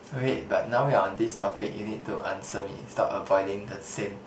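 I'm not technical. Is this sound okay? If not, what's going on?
No. Between 1.15 and 2.63 seconds the speech breaks up into a choppy, robotic stutter. This is repeated packet loss (robotic sound): pieces of the call audio failed to arrive in time, and each hole was patched by stretching the last bit of sound. There are around nine such breaks, none longer than 80 ms. Unlike a single dropout, which is one clean silence, this keeps catching and repeating over the whole stretch, which is what gives the robotic, machine-like quality.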